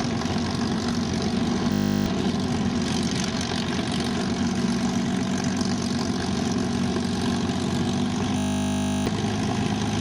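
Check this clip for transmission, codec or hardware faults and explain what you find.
Two system hang loops occur, from 1.72 to 2.06 s and from 8.38 to 9.06 s. Each time, the system stalled while the hardware kept replaying one 20 ms buffer, so the sound becomes a steady 50 Hz buzz. The waveform shows identical repeating cycles, and the spectrogram shows evenly spaced 50 Hz harmonic lines. Roughly a third of a second of audio is lost in the first loop and about 0.7 s in the second.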